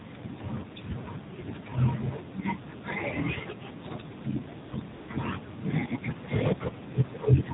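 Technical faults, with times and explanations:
Throughout, AMR narrowband mobile codec: the speech is limited to the phone band, with nothing above 4 kHz, and has a plainly buzzy, synthetic edge. Each 20 ms frame is rebuilt from a vocal-tract model and a few pulses, and the coarse detail points to a low mode near 7.4 kbps.
4.68–4.72 s and 4.94–5.08 s, AMR comfort noise: for 40 ms and then 140 ms the receiver stopped getting speech frames and filled the gaps with smooth synthetic noise, built from a rough level and spectrum. The real background is swapped out and switches back abruptly.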